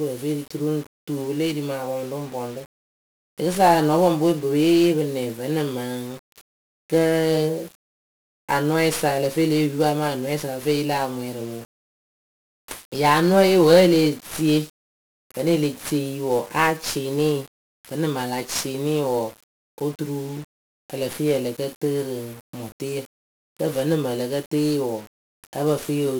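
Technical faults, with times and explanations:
Throughout, 1-bit DFPWM compression. Each sample keeps a single bit that nudges a running level up or down. That coarse tracking leaves heavy broadband noise over the speech. Everything sounds fuzzy and crackly, and the treble disappears under hiss.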